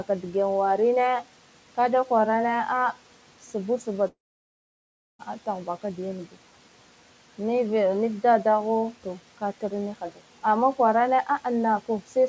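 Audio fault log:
4.08–5.21 s, long network dropout: sound stops for about 1.1 s, a brief fading tail then near-silence, likely packet loss, resuming at "tahbaka da" without the lost audio.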